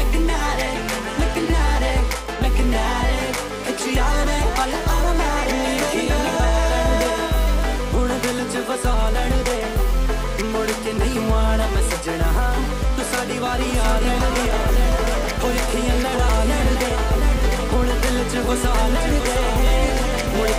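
From 13.49 s to the end, a second copy of the sound trails about 0.7 s behind, a few dB quieter, starting abruptly: a doubled audio track, likely from a second, slower capture path.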